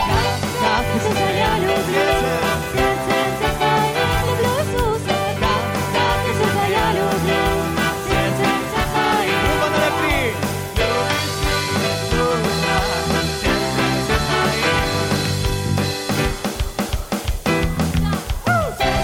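From 13.40 to 15.40 s, low bit depth with dither reduces resolution to 7 bits, replacing rounding distortion with a steady, even hiss around 30 dB below the signal.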